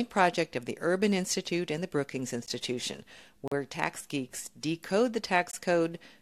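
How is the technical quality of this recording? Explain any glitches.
The speech has three short dropouts, all from a gap between stream segments. The first is a tiny hole at about 2.46 s, roughly 15 ms. The second runs from 3.48 to 3.52 s, about 39 ms. The third is 5.51 to 5.53 s, around 20 ms. The segments here look to be one second long, and their timestamps don't quite meet, so the player pads the gap with silence. Each hole has hard edges, but nothing is actually cut out of the audio.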